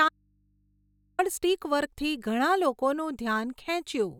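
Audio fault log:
0.09 to 1.19 s, audio dropout to a faint residue: the speech cuts out abruptly almost right at the start and stays gone for about 1.1 s, then snaps back in mid-flow. What fills the hole isn't silence but a low mains hum sitting roughly 40 dB under the normal speech level. That points to the signal feed likely breaking while the input stayed open, so the chain downstream kept running and picked up hum instead.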